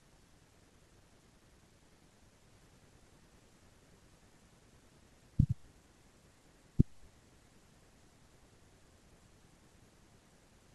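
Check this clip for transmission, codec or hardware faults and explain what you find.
Nothing to report: no transmission, codec or hardware fault can be heard anywhere in the speech.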